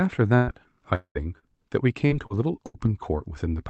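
In this speech recording, the sound twice breaks into a held buzz or fading hiss and then jumps ahead: from 0.35 to 0.50 s, and again from 2.66 to 2.77 s. Each is a burst of packet loss. Several consecutive packets never arrived in time, about 120 ms in the first case and 80 ms in the second. The receiver stretched the last sound across each gap while turning it down, so that audio is simply gone when playback resumes. A longer break runs from 0.95 to 1.18 s. The buzz or hiss carries on for a while, dies away, and leaves roughly 90 ms of silence before the audio returns further along. About 200 ms of material is missing. This is likely a long network dropout: nothing reached the receiver for that stretch, so its concealment ran out and fell silent. Three briefer glitches, at 1.39 to 1.45 s, 2.06 to 2.13 s and 2.26 to 2.33 s, come across as quick smears or wobbles. They are short concealed packet loss. 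Each time, about 40 ms failed to reach the decoder, and the receiver filled the hole by extending the preceding sound, then blended back into the real signal, so a brief consonant there may be lost. The signal tops out around 8 kHz, which fits an Opus call codec running near 40 kbps through a WebRTC jitter buffer.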